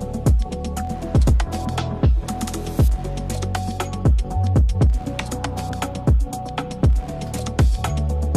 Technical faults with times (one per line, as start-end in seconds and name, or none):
5.72 dropped samples